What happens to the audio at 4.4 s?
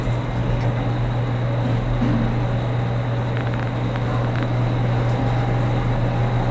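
A train of clicks runs from 3.37 s to 4.44 s, so 4.4 s is its final moment. About ten similar pulses arrive unevenly, roughly 10 per second, likely from electrical interference or a faulty connection, popping well above the sound, which carries nothing above 8 kHz.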